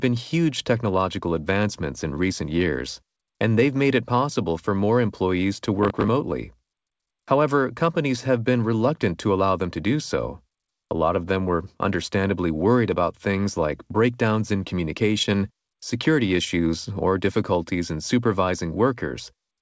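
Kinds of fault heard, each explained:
processor overload crackle: Just after "for more employees to", from 5.83 to 6.09 s, about ten tiny buffers of a few milliseconds each missed their deadlines again and again, each replaying stale audio with hard edges. Unlike a single dropout, it is a dense, gritty run of clicks.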